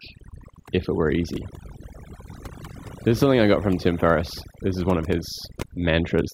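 Overdone noise removal, throughout the speech, mutes bands near the noise floor, taking quiet parts of the voice with them and leaving the background broken into twinkling, warbling specks; the spectrogram shows scattered specks on empty background.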